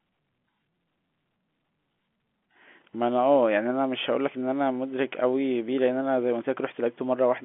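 No technical faults are audible in this telephone-band speech.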